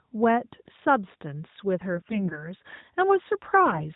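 From 1.94 to 2.51 s, the speech turns hoarse and gargly. These are AMR bit errors. On a weak link, the less protected bits of each frame arrive flipped, around 7 percent of them, yet the frames still pass their checksum. The excitation pulses land wrongly, and the fine pitch, gain and spectral values drift. Pitch and level hold roughly steady. A shorter, harsher burst follows from 3.66 to 3.84 s, with around 10 percent of bits flipped. The narrowband mobile codec underneath sounds consistent with the 12.2 kbps mode.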